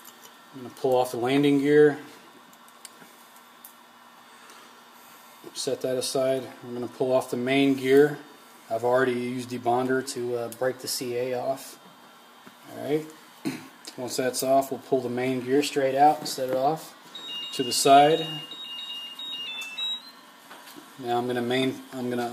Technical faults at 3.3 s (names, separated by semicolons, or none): none